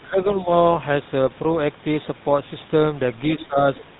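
From start to finish the speech carries the GSM full-rate codec's signature: a buzzy, gravelly roughness from the coarse, pulse-driven excitation, and nothing above 3.8 kHz, which fits a 13 kbps GSM full-rate coder. The grainy texture, not just the dull top end, sets it apart from simple band-limiting.

From 0.02 to 0.2 s the talker dips by roughly 10 dB, and again from 3.39 to 3.58 s by roughly 15 dB. This is likely speech suppressed in double talk by an echo canceller ducking both voices. The level sinks rather than going silent, and the second dip lines up with another voice, which a network dropout would not.

That other voice is the other side's voice leaking through, likely residual loudspeaker echo the canceller missed. It appears as a faint scrap at 3.41 to 3.45 s, about 20 dB below the talker, and again at 3.75 to 3.85 s, about 25 dB down. It is a separate voice, not a delayed repeat of the talker's own sound.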